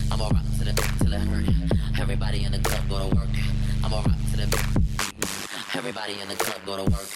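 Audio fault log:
throughout: overlap-add ripple. Level swings by about 60 dB roughly 100 times a second. Overlapping frames don't sum evenly, giving a harsh, buzzy tremolo.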